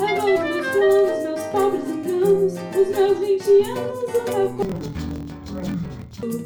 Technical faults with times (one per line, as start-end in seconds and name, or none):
4.62-6.24 interleaved audio read as planar